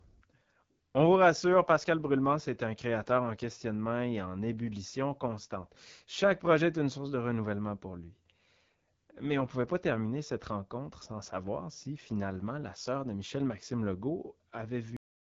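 From the first moment the whole clip runs through the AMR wideband (HD Voice) codec, and the damage is plainly audible. Nothing gets through above about 7.5 kHz, and the top of the band sounds like hiss rather than real detail, because the codec rebuilds speech from a pulse-excited vocal tract model and fills the highest band with shaped noise. The voice comes across rough and raspy, which fits one of the lowest AMR-WB rates, around 8.85 kbit/s.

Then at 14.97 s the clip has a cut-off end. The audio stops dead in the middle of a sound and drops straight to digital silence, with no decay, for the last 0.43 s. That's what you get when the final buffers never got written out or played, so the recording just ends where the data runs out instead of finishing naturally.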